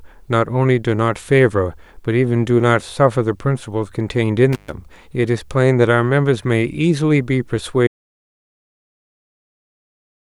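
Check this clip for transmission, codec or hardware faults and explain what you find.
Two hardware faults are audible in this speech clip.

From 4.53 to 4.72 s an intermittent contact opens for about 124 ms: a loose plug breaks the line, so crackle brackets the cut and faint hiss remains, unlike true silence.

From 7.87 s to the end, an audio dropout to silence leaves plain silence with no room tone or crackle, likely a lost input while recording continued.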